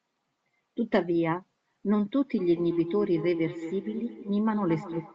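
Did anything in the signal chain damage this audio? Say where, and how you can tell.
Yes. From 2.38 s to the end, speech returns roughly every 200 ms, thinner and more ringing each pass, peaking about 10 dB below the direct sound. This is feedback echo between two devices: another device on the call replays this microphone acoustically, and the local echo canceller cannot remove it.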